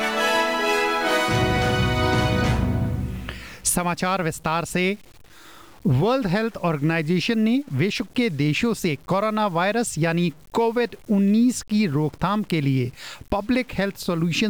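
Grainy, signal-following distortion runs through the whole clip, with quiet passages turning gritty and the faintest moments sputtering or dropping out. This is likely low bit depth without dither: the audio seems truncated to about 7 bits, leaving error around 35 dB below the signal.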